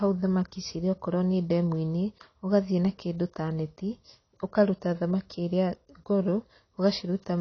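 A speech clip, dull and smeared from start to finish, with a warbling, fizzy texture on sustained sounds and sibilants. Nothing is present above about 6.3 kHz, so a spectrogram shows a hard horizontal ceiling there, with patchy holes and blotches in the bands below it. This is likely AAC compression, with the encoder lowering its cut-off and quantising coarsely, which fits AAC-LC at a low bitrate around 24 kbps.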